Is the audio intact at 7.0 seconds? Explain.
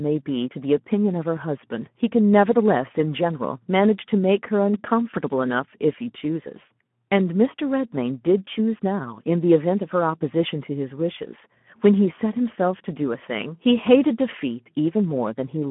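No. Speex codec damage runs throughout, so 7.0 s is affected: the CELP coder starves the excitation, at a level fitting roughly 11 kbps, making the speech hoarse and noisy. That grainy texture separates it from a clean 150 Hz to 3.4 kHz telephone band, with nothing above 3.8 kHz.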